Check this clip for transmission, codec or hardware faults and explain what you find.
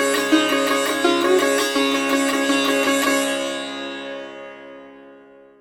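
There's one fault: the adaptive stream falls back to a lower bitrate at 2.78 s and stays there to the end. The player switched to a cheaper version when the connection slowed, so quality drops suddenly with no gap. Everything above 14.9 kHz disappears, the top end turns thin, and codec artefacts rise. That fits a step from AAC at 96 kbit/s down to HE-AAC at 24 kbit/s.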